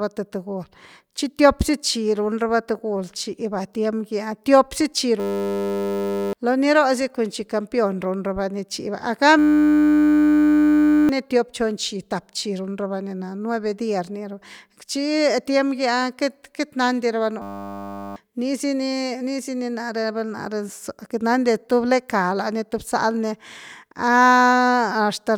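System hang loop at 5.2–6.33 s, 9.39–11.09 s (before "ni tiop chon") and 17.42–18.16 s (after "nandi rava"). A frozen system let the hardware replay one 10 ms buffer, producing a steady 100 Hz buzz rather than a dropout's silence. Each freeze loses roughly one, one and a half, and under one second of speech.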